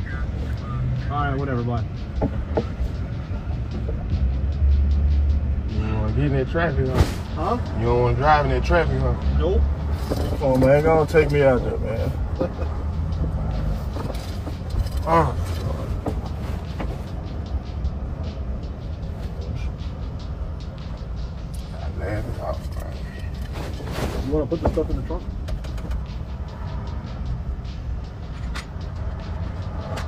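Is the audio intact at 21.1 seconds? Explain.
Yes, the audio is intact at 21.1 seconds, with no dropout, click, distortion or other fault at that point.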